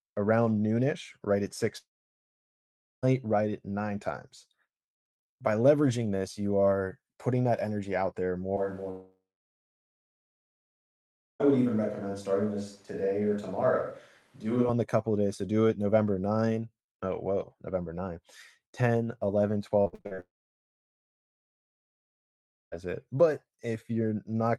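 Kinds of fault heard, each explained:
Long network dropout: Audio likely stopped arriving for one to two and a half seconds; the last sound trails off into silence, and speech resumes with that stretch missing.
Switch to a distant microphone: The close microphone was likely dropped for a farther one from 8.57 to 14.69 s; speech turns roomy and hollow at similar level, with faint background noise.
Repeated packet loss (robotic sound): Six short gaps, the longest 51 ms, hit 19.8 to 20.2 s; patching them leaves choppy speech with pieces missing just before the third dropout.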